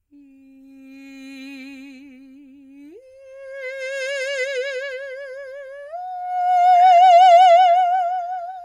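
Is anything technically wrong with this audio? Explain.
No, nothing technically wrong stood out on listening to this music.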